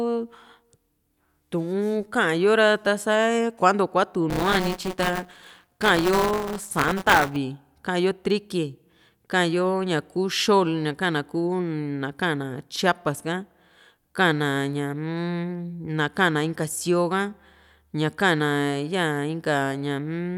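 From 4.30 to 7.36 s the playback buffer suffers buffer tearing: the writer and the hardware reader have slipped, so each period carries about a tenth of stale audio from around 20 ms earlier. The hard joins produce a rattling 188 Hz buzz, which fits a 256-sample buffer.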